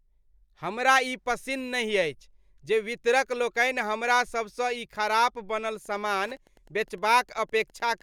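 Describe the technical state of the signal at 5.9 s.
At 5.9 s the speech carries Wi-Fi interference, running from 5.64 s to the end. A nearby radio's beacon, every 102.4 ms, is rectified by the audio circuit. It sounds as a steady tick about ten times a second, roughly 35 dB below the speech.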